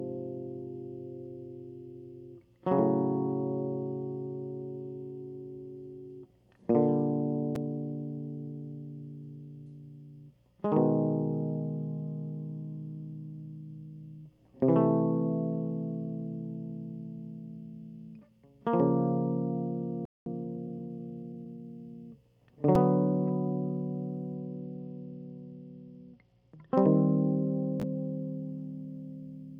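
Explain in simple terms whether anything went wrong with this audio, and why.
At 20.05 s the music cuts out into silence for about 0.21 s, then carries on from the same spot. This is a playback stall. The likely cause is that the player ran short of incoming audio, or was briefly held up by something else on the device, so it had nothing to send to the speakers until the data arrived again.

Straight after that, from 20.26 s to 21.64 s, the music runs noticeably fast, about 1.15 times normal speed, yet stays at its normal pitch. This is time-compressed catch-up. Having fallen behind during the gap, the player shortens the waiting audio by snipping out tiny slices and blending the joins. That hurries the music without making it higher.

From 24.35 s to 27.24 s the music turns dull and gritty. The crisp top end fades, and a rough, grainy noise sits over everything until it clears. This is a Bluetooth SBC bit pool drop. 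When the wireless link got crowded, the phone cut how much detail it sent so the sound wouldn't break up, which fits the amount being roughly halved. The highest sounds were left out first, and the rest were described more crudely, which causes the grit.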